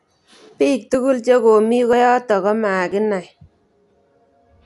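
From start to finish the speech is dull and band-limited, with nothing above 11.5 kHz, and a rough, fluttering grain sits around the voiced sounds. This is plainly audible codec damage, likely from Dolby Digital compression at a low rate, which fits a 64 kbps stream: the encoder narrows the band and leaves many frequency lines without real detail, and the decoder fills them with noise. Unlike plain low-pass filtering, the top isn't just cut away; the remaining band itself sounds grainy.

At 0.94 s, just before "che komi", the sound skips forward. It skips again at 1.93 s, just after "che komi", then at 2.92 s and 3.90 s. Each time a tiny piece, around 15 ms, is gone and the two sides butt together with no gap. The steady one-second spacing points to audio missing between chunks, likely lost while one chunk closes and the next opens. Random network dropouts would not keep this regular rhythm, and they would often leave silence or a smeared repeat in place of a clean splice.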